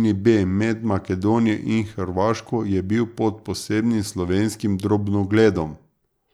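No technical faults occur at any point in the speech, so there is nothing to describe in time order.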